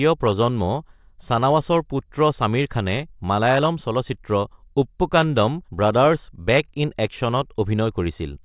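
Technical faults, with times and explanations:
Nothing in the speech stood out as a technical fault on listening.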